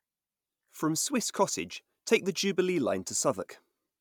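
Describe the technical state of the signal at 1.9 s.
At 1.9 s the speech signal is intact, with no audible dropout, distortion, clipping or other fault at that point.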